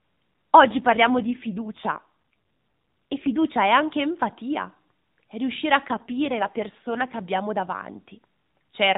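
AMR rate drop from 0.64 to 3.49 s, ending just before "è anche empatia è", and again from 5.86 to 7.30 s, right after "empatia è riuscire a". In this narrowband mobile speech recording, capped below 4 kHz by the AMR codec, the audio turns rougher and more synthetic without any gap or change in bandwidth, which fits the network forcing the codec down from 12.2 to about 5.9 kbps and spending the freed bits on error protection.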